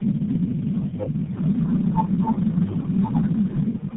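Tandem speech coding runs throughout: the speech passed through AMR-NB, iLBC and GSM full rate in turn, each recoding the last one's damage, leaving it rough, warbly and empty above 3.8 kHz.

Speech suppressed in double talk, from 3.66 s to the end: the level sinks by about 10 dB, likely an echo canceller turning down this talker while the other side spoke.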